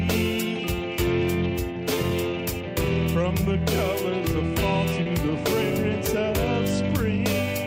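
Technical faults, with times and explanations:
5.03–5.07 s, short concealed packet loss: a brief smear or wobble. 20 ms of audio never reached the decoder in time, so the receiver filled the gap by stretching the sound just before it, then blended back into the real signal.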